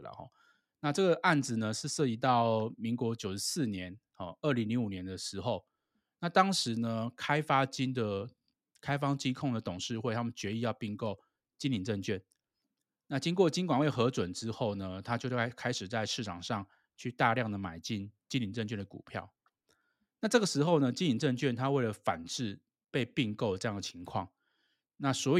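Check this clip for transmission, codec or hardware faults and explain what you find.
Nothing wrong turns up here: the speech comes through steady and intact, with no dropouts, glitches or damage from the transmission path or the equipment to point to.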